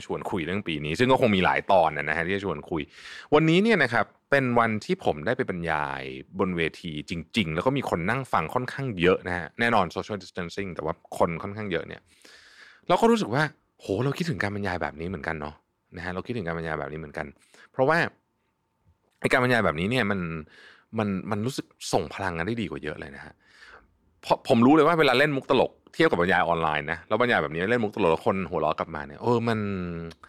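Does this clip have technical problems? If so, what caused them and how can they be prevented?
No, there's nothing technically wrong to hear in this speech clip, so there's no cause to track down and nothing that needs preventing.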